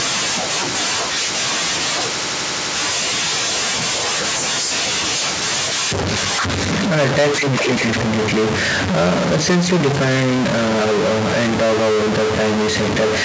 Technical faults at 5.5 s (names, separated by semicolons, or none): stuck bit